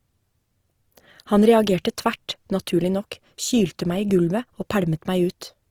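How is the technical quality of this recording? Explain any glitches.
The quality is held back by one fault that runs through the whole clip: the speech sounds grainy and rough rather than clean. From start to finish it carries the mark of Opus compression, likely in the music-oriented CELT mode at a low rate that fits roughly 24 kbps. With too few bits, the encoder keeps each band's energy but fills the fine detail with folded copies of lower bands or with noise, so harmonics lose their clean structure and voiced sounds turn hissy and coarse. Bandwidth stays full, reaching about 20.5 kHz. On a spectrogram, the harmonic lines look smeared and speckled, with noisy texture filling the gaps between them instead of dark holes. The upper band remains populated right up to that ceiling. The waveform looks unremarkable.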